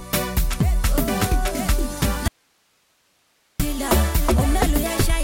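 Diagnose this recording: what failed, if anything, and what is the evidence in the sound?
An audio dropout to a faint residue runs from 2.28 to 3.60 s: the sound cuts abruptly to hiss roughly 45 dB below the signal, then returns just as suddenly after 1.32 s. The live hiss points to a break at the analogue wiring stage, likely an intermittent connection upstream of a still-running input.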